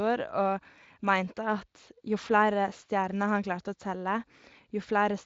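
Nothing is technically wrong with this speech clip.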